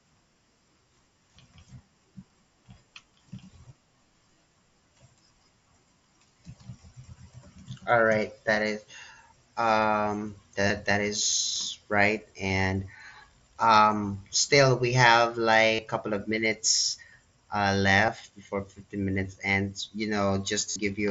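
Concealed Bluetooth headset packet loss hits this speech clip at 10.68, 12.48, 15.75 to 15.79, 18.06 and 20.70 to 20.76 s. Voice packets between headset and phone went missing, and the receiver patched each gap by repeating the closest-matching slice of the preceding waveform. The brief 15 ms losses are two-frame runs, and like the 30 ms and 52.5 ms runs they turn into a held, buzzy tone that warbles slightly as real audio resumes, all over mSBC wideband speech capped near 8 kHz.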